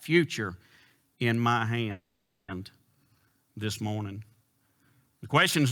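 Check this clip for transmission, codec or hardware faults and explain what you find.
One fault. At 1.91 to 2.51 s, after "in my", a call audio freeze: the sound trails into a fading buzz or hiss, then 190 ms of silence, and speech resumes 570 ms late with nothing lost. The likely cause is delayed packets draining the jitter buffer. A spectrogram would show smeared, decaying bands, and the waveform would show a flat stretch.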